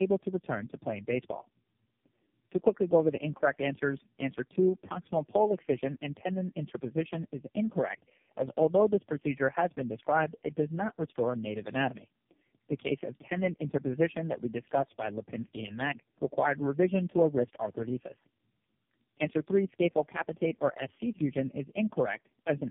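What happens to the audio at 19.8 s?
At 19.8 s the speech carries tandem speech coding, and it persists across the whole clip rather than starting there. The sound is rough, muffled and warbly, with nothing above 3.5 kHz. That points to three low-rate speech codecs in a row, such as G.729A and two AMR-NB stages. Each was decoded and coded again at a network border. Every coder then worked on the previous one's already damaged output, so the errors stacked.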